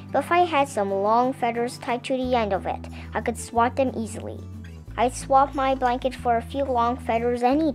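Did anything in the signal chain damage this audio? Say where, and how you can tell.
No, nothing in the signal chain audibly damaged this audio, and no stage from capture to playback left a mark on the signal.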